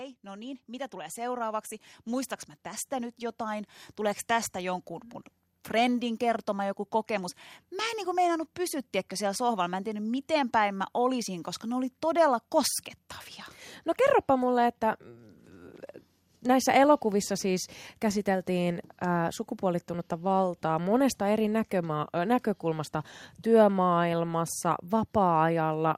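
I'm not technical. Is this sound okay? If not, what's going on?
No. Automatic gain rising runs from 0.22 s to the end. The recorder decided the speech was too quiet and kept turning its own volume up bit by bit, so the voice and the background noise both swell louder together.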